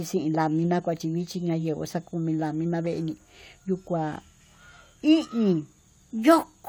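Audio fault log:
No faults heard anywhere in this speech recording.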